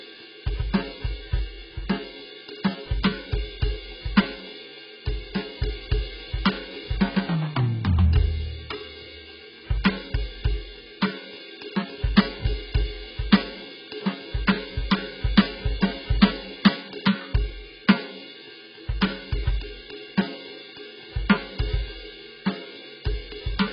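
From the first second to the last, the music sounds dull and smeared, with nothing above 5.4 kHz and a warbling, fizzy texture on sustained tones. The likely cause is heavy AAC compression at a very low bitrate, around 12 kbps, where the encoder drops the top band and coarsely quantises what remains. On a spectrogram, energy stops at a flat ceiling near 5.4 kHz, and the area below shows patchy holes and blurred, noisy bands.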